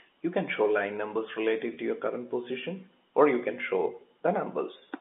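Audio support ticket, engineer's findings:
Brief held, buzzy smear at 1.74 to 1.77 s, about 30 ms, fits a single dropped packet. Packet loss with pitch repetition: the receiver's concealment looped the last pitch period to fill the gap. Telephone-band G.711 path sounds as expected around it.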